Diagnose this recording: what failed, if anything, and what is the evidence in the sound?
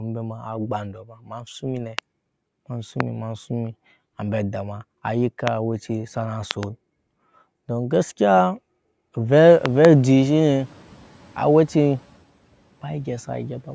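Speech cut by the noise suppressor, a call-processing fault. Between 0.94 and 1.45 s the speech sinks and returns. Some parts fall by about 12 dB at the deepest point. Roughly a third of a second is affected in total. Those sounds come out swallowed and faint. The suppressor's gain rule misjudged them as background. It pulled them down with the noise floor, as if they were unwanted sound.

Loud pops appear five times. Single pops fall at 1.99, 3.01 and 5.48 s. Paired pops occupy 6.51 to 6.65 s and 9.66 to 9.87 s. Each peak stands well above the speech, around 20 dB over it. The speech runs on beneath them without a break. The likely cause is an electrical transient in the analogue wiring, such as a loose plug, a switch or static, shaped into a sharp click by the circuits after it.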